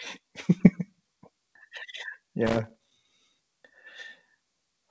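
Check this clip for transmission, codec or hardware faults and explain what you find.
Two faults stand out in the speech. From 0.58 to 0.62 s there is short concealed packet loss: about 20 ms of audio never arrived, and the receiver extrapolated the preceding sound to fill it, leaving a brief smear. Unlike a hard dropout, there is no silent gap. From 2.47 to 2.95 s there is loose connector crackle: an intermittent contact chopped the signal, producing irregular scratchy bursts for about half a second. Its random, sustained texture sets it apart from a brief concealment smear.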